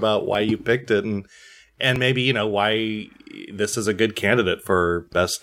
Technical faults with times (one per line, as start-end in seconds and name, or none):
0.35 dropped buffer (overrun)
1.96 dropped buffer (overrun)